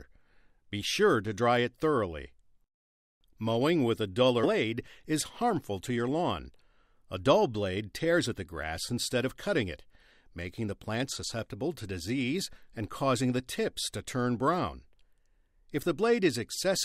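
At 4.43 to 4.45 s the audio makes a skip ahead: about 0.7 s of sound never plays, and the material on either side of the cut is butted together with no filler and no silence between them. The receiver discarded a block of audio, whether lost in transit or thrown out by an overflowing jitter buffer, because newer audio was already queued. The result is an abrupt forward jump, with the delay cut by about the same amount.

From 4.53 to 7.05 s a jitter buffer speed-up follows. The buffer was still holding more audio than its target, so the receiver trimmed short slices, each one or a few pitch periods long, over and over to drain the excess. Playback runs at 106% of normal speed, shedding roughly 150 ms in total. Pitch stays put, but the sound is audibly hurried across that span before settling back to normal pace.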